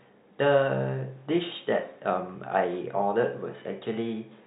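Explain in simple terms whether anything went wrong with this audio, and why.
Nothing went wrong here; no faults can be heard.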